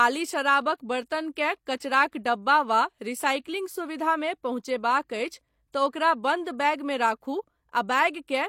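At 1.79 s a short hiss creeps in just ahead of a sharp onset in the speech and runs for about 23 ms until the attack lands at 1.81 s, so the attack sounds blunted and smeared rather than crisp. This is pre-echo: the transform codec spread the quantisation noise meant for the loud attack across its whole block, and that noise spilled into the quiet moment before the attack.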